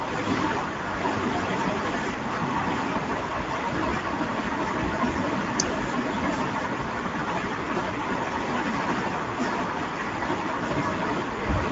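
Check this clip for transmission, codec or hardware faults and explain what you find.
One codec fault runs through the whole recording. Speex codec damage, plainly audible from start to finish: this CELP coder models the speech with too few bits for the excitation, consistent with a middle rate near 17 kbps, so the speech sounds noisy and hoarse throughout.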